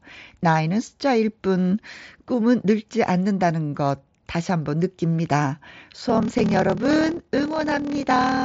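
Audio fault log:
5.97 to 8.44 s, block size mismatch (padded): One stage writes blocks shorter than the next stage reads, which fits 1024-sample blocks read as about 1152, and the shortfall is zero-filled. The repeated gaps buzz at 38.3 Hz, and the sound slows to 0.889 times speed with its timbre unchanged.
6.39 s, concealed Bluetooth headset packet loss: A single 7.5 ms loss on the headset link was covered by repeating the best-matching stretch of recent waveform. Because it is so brief and isolated, it is nearly hidden.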